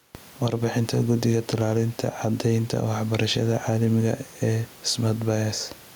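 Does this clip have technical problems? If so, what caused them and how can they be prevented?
Yes. Gain pumping runs throughout. Room noise sits about 44 dB below the speech, and the gain ducks roughly 5 dB under loud speech. A fast limiter likely tames excessive microphone gain. Lower the input gain.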